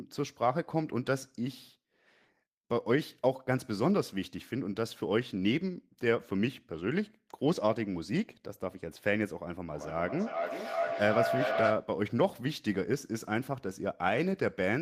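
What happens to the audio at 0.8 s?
Nothing goes wrong at 0.8 s; the speech continues there without any audible dropout, click, distortion or glitch.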